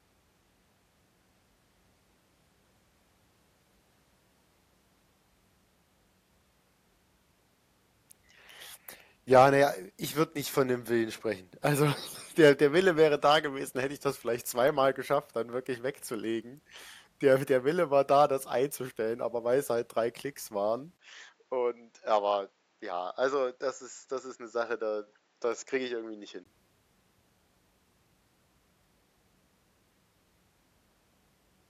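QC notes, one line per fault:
20.97–26.46 s, input switched to a poorer device: input likely changed microphones; after a 20 ms gap, speech turns dull, nothing above 7.6 kHz, around 5 dB quieter, faint new noise.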